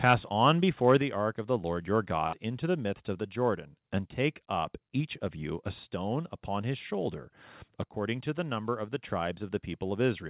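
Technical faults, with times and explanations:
0.06–0.13 s, 0.46–0.51 s and 0.88–0.97 s, microphone overload: the loudest peaks turn harsh and crackly, about 4, 3 and 2 dB past the converter's limit. The likely cause is microphone input set too high, so the converter flattens the waveform tops, adding gritty distortion.
1.02 s, microphone volume stepped down: the level drops abruptly by about 5 dB just before "ark of the", right after the distorted peaks. This is likely the call software reacting to the overload by cutting the microphone's input gain in a single step.
2.27–2.35 s, burst of packet loss: just before "into the midst of", the sound stretches into a short held, fading tail of about 53 ms, then jumps ahead. Roughly 60 ms of audio went missing, so the receiver extended the last sound and then resumed later.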